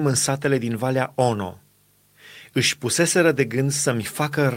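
Speech clip with a lost packet rebuilt from error correction at 3.35 to 3.37 s: one 20 ms frame sounds rougher and noisier, rebuilt from a low-bitrate in-band copy carried by the following packet.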